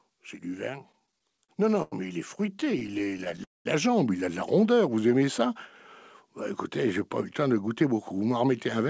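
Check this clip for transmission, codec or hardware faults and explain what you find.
The speech passes through a wideband call path with no content above 8 kHz, consistent with G.722, and shows automatic gain rising, two stretches of repeated stalls, a freeze, and jitter buffer slow-down and speed-up.

Automatic gain rising runs from 0.43 to 4.44 s. The gain control judged the input too quiet and raised its gain by about 8 dB over several seconds, so the voice and the background noise swell together rather than the speech alone getting louder.

Repeated stalls (stutter) occur from 0.86 to 1.94 s and again from 2.42 to 3.40 s. Packets kept arriving late, draining the jitter buffer each time. The receiver extended the last sound to bridge the gaps, the longest about 91 ms, so the speech drags and stutters with nothing lost.

A call audio freeze occurs from 3.44 to 3.67 s, likely caused by packets held up in transit that emptied the jitter buffer. 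The last sound is drawn out and fades to about 190 ms of silence, then the speech resumes where it stopped, roughly 213 ms late.

Jitter buffer slow-down occurs from 4.78 to 5.48 s. The buffer was building reserve, so the receiver repeated single pitch periods, adding about 81 ms. Speech plays at 89% speed with unchanged pitch, and sounds are stretched.

Jitter buffer speed-up runs from 7.67 s to the end. The buffer held too much audio, so the receiver cut short pitch-period pieces, about a tenth of a second in total. Speech runs at 108% speed at the same pitch and sounds hurried.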